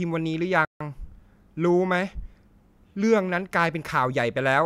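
At 0.65 s the speech cuts to silence for about 155 ms, resuming at 0.81 s. It is a dead gap, not a fade. This is likely a Bluetooth stall: interference delayed packets, the headphone buffer emptied, and playback waited for resent data.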